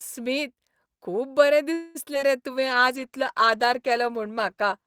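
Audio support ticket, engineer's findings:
Call audio freeze, 1.73–1.97 s: sound hangs as a fading buzz-like continuation for about 0.22 s, then resumes where it stopped with nothing lost. Likely packets stalled in transit and the jitter buffer ran dry. Receiver extended the last sound as a placeholder. Playout delay grew by the same 216 ms.

Short concealed packet loss, three hits at 2.05 s, 2.15 s and 2.21 s: brief smears or wobbles right after the freeze. About 20 ms of audio each missed the decoder and was patched by extrapolating the preceding sound before blending back. At 2.15 s the fill is only about 3 ms and delay drops by roughly 15 ms, so the receiver skipped most of that hole.

Jitter buffer slow-down, 2.51–2.80 s: speech drawn out, slower at unchanged pitch, running at 90% speed. Receiver repeated pitch periods and pause fragments to rebuild its reserve, adding 35 ms.

Call bitrate drop, 2.55 s to end: sound turns rough, watery and dull. 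Bandwidth estimate fell and the Opus encoder went from 64 to 13 kbps, coding coarsely with high frequencies trimmed. Lowest rate holds about 2.1 s.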